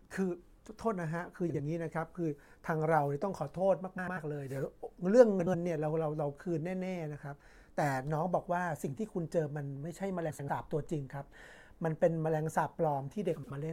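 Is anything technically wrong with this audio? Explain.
Yes, the speech has frames out of order, five times: 1.49 to 1.60 s, 3.98 to 4.18 s, 5.40 to 5.55 s, 10.29 to 10.49 s, and 13.36 to 13.51 s. Each time, two neighbouring chunks of decoded audio got played in swapped order, roughly 46 to 93 ms apiece, which fits runs of two to four codec frames. You hear a quick garbled flutter, but nothing goes missing.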